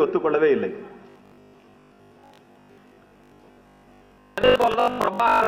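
From 1.10 s to the end, a rigid, metallic 50 Hz buzz runs through the sound, following the original only loosely. This robotic sound from repeated short buffers likely comes from audio arriving too seldom, with roughly 70 percent of the time filled by looping the last 20 ms.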